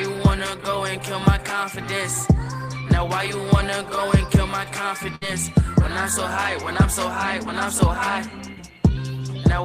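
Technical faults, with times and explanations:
5.15 to 5.23 s, burst of packet loss: about 60 ms of audio never arrived, so the receiver stretched the last sound over roughly 59 ms while fading it, then jumped ahead. On a spectrogram, frozen, repeating bands dim away before an abrupt restart.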